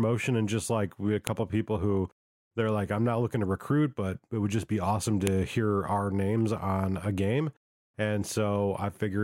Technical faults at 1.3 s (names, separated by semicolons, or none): file header played as audio